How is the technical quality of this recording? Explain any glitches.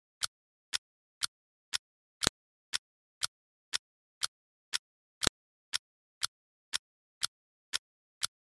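Two sharp clicks break the recording, at 2.27 s and 5.27 s, both from a file header played as audio. Pieces spaced 3 s apart were joined with their WAV headers left in, so those header bytes play as a loud snap, seen as a narrow waveform spike and a vertical broadband line on a spectrogram.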